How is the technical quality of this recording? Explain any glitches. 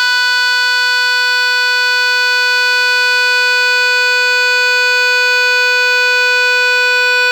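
Nothing technical gets in the way here, and the music runs along without a single glitch to point to.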